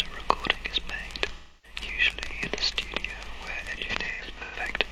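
AAC frame loss with concealment hits at 1.33–1.79 s, then scattered from 3.77–4.55 s. The decoder repeats the last spectrum, giving smeared, phasey patches.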